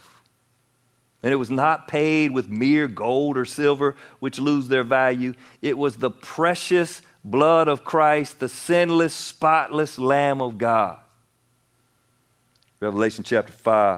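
Lost packets rebuilt from error correction occur at 1.39, 2.55 and 3.61 s (just before "which lose their value"), then over longer spans at 8.17–8.23 and 10.39–10.45 s. Low-bitrate backup copies fill them, so the waveform stays continuous, but each 20 or 40 ms patch sounds rough and noisy.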